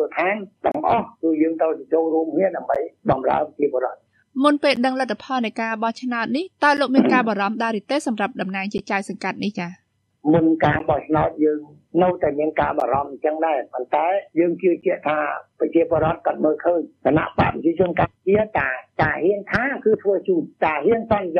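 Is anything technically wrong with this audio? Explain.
Yes. There are gaps at joins of encoded pieces, spaced about every 2 s. The first runs from 0.72 to 0.75 s, a 30 ms hole. Shorter 11 ms gaps follow at 2.75, 4.76, 6.77, 8.78, 10.79, 12.80 and 14.81 s. Each piece was encoded on its own and spliced untrimmed. The encoder's start-up delay and final-frame padding stay in. Continuous sound drops out abruptly, with smeared edges, then resumes where it left off.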